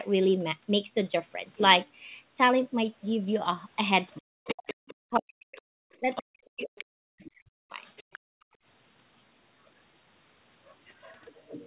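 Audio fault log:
4.14–5.16 s, 5.56–6.23 s, 6.77–6.84 s, 7.25–7.31 s, 7.83–8.19 s, other side's voice leaking through: A second voice is heard under the speech. It is strongest from 5.56 to 6.23 s, about 10 dB below the speech. It sits about 15 dB down in the first stretch and about 20 to 25 dB down in the brief later scraps. This is likely the far end's voice playing from this talker's loudspeaker that the echo canceller failed to remove from the microphone.
4.18–5.58 s and 6.00–7.80 s, speech suppressed in double talk: The speech sinks sharply, with the deepest dips about 40 dB. In total about one second is affected in the first span and about one and a half seconds in the second. These spans overlap the leaking voice, which points to both sides talking at once. The echo canceller likely could not tell its own talker from the echo and pulled everything down.
8.19–8.62 s, background gated by the echo canceller: Right after the last leaked scrap, the room sound drops away for about 400 ms, falling by up to about 33 dB before it returns. 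The canceller clamped the microphone hard while the loudspeaker was playing and released it when it let go. The result is a brief, unnatural hole of silence in the background.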